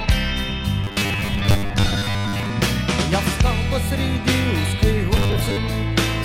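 From 0.84 to 2.52 s and again from 5.17 to 5.57 s, the sound becomes a rigid metallic 100 Hz buzz, robotic sound from repeated short buffers. Audio likely arrived too seldom, so a 10 ms chunk was looped in place of most, then about half, of the real signal.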